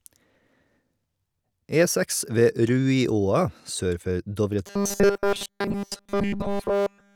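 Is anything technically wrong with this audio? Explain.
Yes. Robotic sound from repeated short buffers runs from 4.67 s to the end, a fixed 200 Hz metallic buzz, likely from the last 5 ms being looped throughout while new audio was missing.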